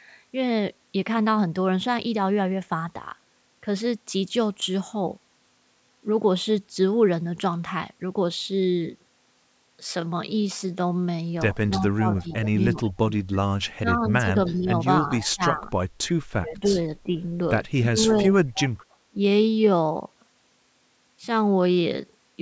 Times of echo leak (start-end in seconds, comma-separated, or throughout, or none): 12.32-12.93, 14.46-14.59, 15.21-15.29, 18.11-18.97